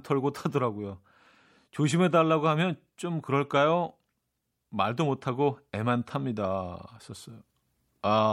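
No technical faults can be heard in this speech recording. Nothing in the audio calls for a fault description.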